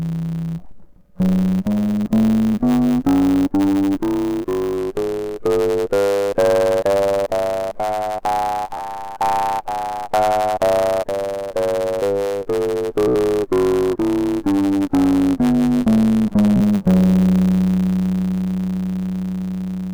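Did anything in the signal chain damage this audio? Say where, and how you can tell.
Yes. At the buffer stage there's a block size mismatch (truncated): a steady 100 Hz buzz, and the music runs 1.07 times fast with its timbre intact. That fits 512-sample blocks losing their tails.

Downstream, at the codec or storage stage, repeated frames cause stutters at 4.74, 8.77, 13.08 and 16.56 s. Each replays a short stretch of frames and adds 27 to 80 ms.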